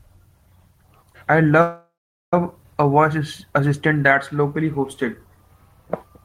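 From 1.61 to 2.34 s a call audio freeze stretches the last sound into a fading buzz, then about 420 ms of silence: a smeared spectrogram band, then a flat waveform before "a voice assistant that's", likely from delayed packets.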